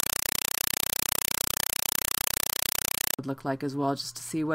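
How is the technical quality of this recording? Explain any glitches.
Poor at the start: from 0.0 to 3.19 s, a compressed stream is played as audio. Undecoded AC-3 frames are read as samples, giving 4 ms noise bursts 31.25 times a second, heard as chattering static. On a waveform they show as regular blocks separated by flat gaps, and a spectrogram shows broadband vertical stripes.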